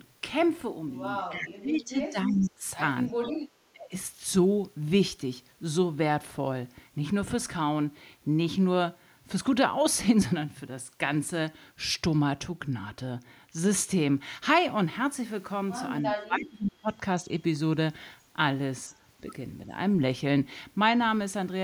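From 1.29 to 2.65 s the speech dips by roughly 25 dB. About a second is affected in all. This is likely speech suppressed in double talk. Both sides spoke at once, and the echo canceller turned the talker down along with the echo.

At 2.43 s a faint echo leak is heard. It is a delayed copy of the voice, 307 ms late and about 25 dB below the speech. The canceller likely let part of the loudspeaker signal through.

From 3.31 to 3.44 s the background is gated by the echo canceller. The room sound drops about 11 dB for a moment. It returns once the canceller lets go.

The same dips return at 3.72 to 3.93 s and at 16.03 to 16.9 s, again roughly 25 dB deep. A brief, shallow dip of about 5 dB follows at 19.66 s. These are likely further double-talk suppression.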